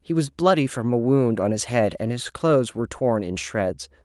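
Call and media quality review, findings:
No faults heard in this recording.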